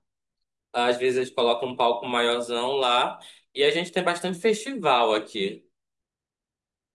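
No technical faults can be heard in this recording.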